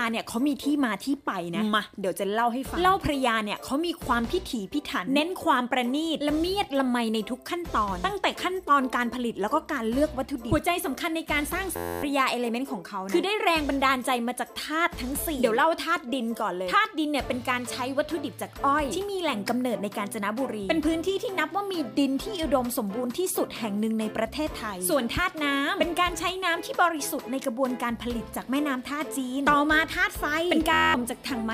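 A steady buzz at about 86.1 Hz replaces the sound from 11.76 to 12.03 s and again from 30.73 to 30.94 s. This is a system hang loop: the system froze while the hardware replayed one 11.61 ms piece, which fits a 512-sample buffer. Roughly 300 ms and 200 ms of audio are lost.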